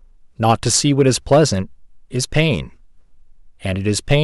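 Hard clipping from 0.46 to 1.42 s (overdriven about 6 dB) and 4.11 to 4.15 s (about 4 dB) flattens speech peaks, adding harsh, crackling high harmonics.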